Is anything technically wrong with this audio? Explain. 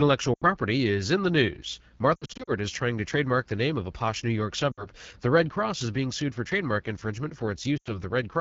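Yes. Throughout, the speech sounds rough and raspy, the mark of the AMR wideband (HD Voice) codec running at a low rate, consistent with 8.85 kbit/s.

Lost AMR speech frames cause brief warbling, smeared dips at 0.33–0.45 s (just before "is in the news"), 2.15–2.52 s (between "is in the news" and "is trying to trademark"), 4.71–4.86 s, and 7.78–7.89 s (after "sued for trademark infringement"). The decoder is filling corrupted frames by repeating the last good settings at falling gain. The second event is choppy, with about 180 ms lost in short bursts over roughly a third of a second.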